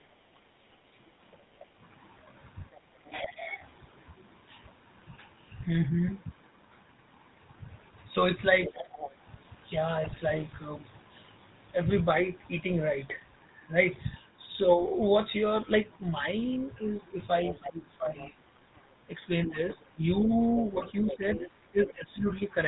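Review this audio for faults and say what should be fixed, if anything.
A buzzy, gravelly roughness runs through the whole recording, with nothing above 4 kHz. That is the GSM full-rate codec at 13 kbps: it rebuilds speech from a vocal-tract model driven by coarse, regularly spaced pulses, and its damage is plainly audible here. Prevent it by carrying the call over a wideband codec such as AMR-WB or EVS.

A second, quieter voice sits underneath from 0.59 to 3.79 s at about 20 dB below the talker, and returns far more strongly from 17.46 to 22.35 s at about 10 dB below. This is the other side's voice leaking through, likely because the far end's loudspeaker output reached the microphone and the echo canceller left a residue. Prevent it with a headset or a better-converged echo canceller with stronger residual suppression.

The talker's level sinks or breaks up at 3.05 to 3.61 s (dipping about 10 dB), briefly at 8.70 to 8.79 s (about 5 dB), and repeatedly from 17.60 to 22.26 s, where roughly one and a half seconds are affected and drops reach about 15 dB. 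This is speech suppressed in double talk, likely the echo canceller turning both down while both sides spoke at once. Prevent it by tuning the double-talk detector so near-end speech is not attenuated.

A burst of squawking, gargling distortion appears from 10.04 to 10.21 s. These are GSM bit errors: corrupted filter, pitch and gain parameters bent the spectrum frame by frame across a stretch that fits about eight codec frames, pointing to an error rate of a couple of percent. Prevent it with a stronger radio link or better error concealment that mutes damaged frames.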